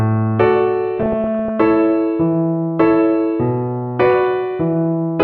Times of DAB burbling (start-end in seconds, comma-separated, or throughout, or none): 0.98-1.49, 4.05-4.14